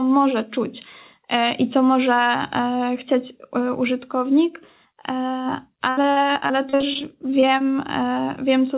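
From 5.9 to 7.61 s there's repeated packet loss, with 15 gaps patched by stretching the last sound, the longest about 69 ms, so the speech turns choppy and robotic through the narrowband, 4 kHz-limited call audio.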